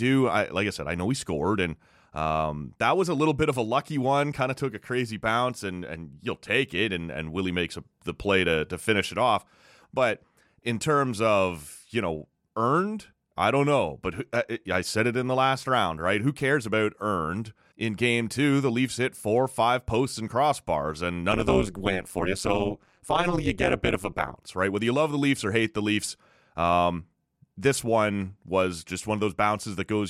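Overlap-add ripple runs from 21.32 to 24.36 s: the speech was split into windowed frames and rejoined with overlaps whose gains fail to sum evenly, so the level dips by about 60 dB around 200 times a second, giving a harsh, metallic buzz with extra tones around the voice.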